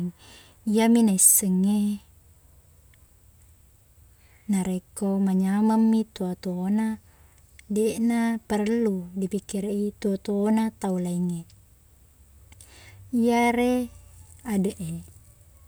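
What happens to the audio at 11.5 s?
Nothing goes wrong at 11.5 s; the speech runs through that moment intact, with no dropout, click or distortion.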